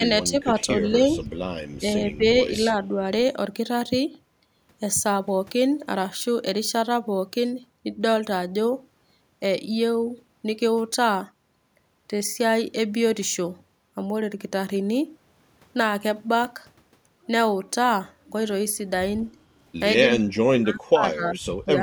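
An echo canceller likely confused the near talker with loudspeaker echo and turned both down, so the speech is suppressed in double talk. The speech dips briefly at 0.00–0.07, 0.23–1.25, 1.79–1.85, 2.04–2.24 and 2.54–3.05 s, by roughly 5 to 15 dB, then drops much deeper, around 30 dB, from 20.03 s to the end.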